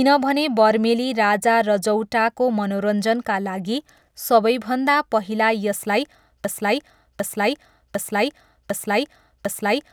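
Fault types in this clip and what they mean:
broken-record loop: From 6.45 s the speech stops advancing and a single 0.75 s fragment plays back to back, identical each time, five times over until the clip ends. The seams fall at the same point in every cycle, so the sound is exactly repeated rather than re-spoken. The likely cause is a stalled player, encoder or stream re-sending the last fragment it held, and the audio that belonged in those final seconds is lost.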